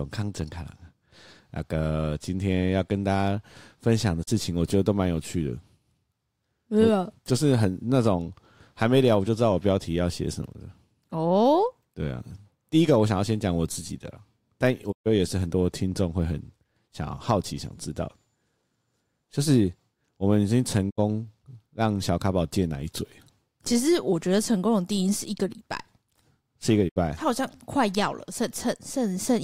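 Digital broadcast dropouts mute the speech at 4.22, 14.91, 20.89 and 26.88 s as the receiver stops on bad frames. Each fades over 20 ms into holes of 32, 128, 64 and 64 ms, which fits whole 32 ms frames. The lost audio never returns.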